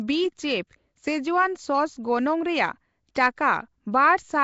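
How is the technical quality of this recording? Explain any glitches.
Technical quality is limited. The speech carries audible low-bitrate codec damage throughout, plus one brief pre-echo.

Across the whole recording the audio has a rough, hissy halo and a smeared, underwater character, and nothing is present above 7.7 kHz. This is most likely Nellymoser compression, the old Flash microphone codec, at a rate that fits about 32 kbps. The codec assigns a fixed, small bit budget to short blocks. Weaker frequency bands receive no bits and are filled with synthetic noise instead of real signal, which produces the hiss and the blurred texture.

At 3.15 s a sharp onset is preceded by a hiss lasting about 13 ms, and the attack itself sounds softened. This is pre-echo. The transform coder spreads its quantisation noise across the entire block, so the noise level suited to the loud attack also fills the quiet stretch just before it. 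The onset therefore loses its crispness and is announced by a smear of noise.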